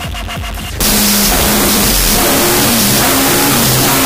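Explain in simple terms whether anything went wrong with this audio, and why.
From 0.81 s to the end, a wrong sample width fault appears: 16-bit audio read as 8-bit, giving loud noise over a buried, half-speed, lowered-pitch original.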